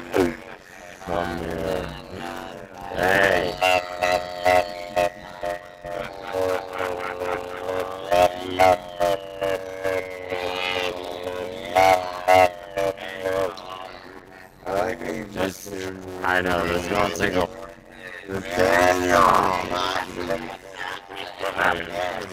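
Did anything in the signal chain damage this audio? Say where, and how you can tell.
Yes. There is a block size mismatch (padded) at the driver or buffer stage throughout the clip. A steady buzz at 91.9 Hz sits under everything, and the audio plays at 0.533 times normal speed. Each short written block, which fits 256 samples, is zero-filled to the reader's longer size.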